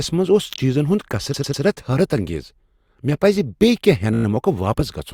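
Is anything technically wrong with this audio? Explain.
Yes. Repeated frames occur twice. At 1.34 to 1.63 s, after "منٛز اوس چیزن ہُند", a 108.8 ms block of the compressed stream plays three extra times, adding 296 ms. At 4.14 to 4.25 s, a 17.4 ms block repeats six times, adding 105 ms. Each time the decoder replays the same stretch of audio, so the sound stutters. Unlike a dropout, no audio goes missing; the clip gets longer instead.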